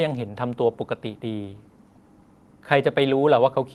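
A short speech recording, and nothing technically amiss stood out on listening.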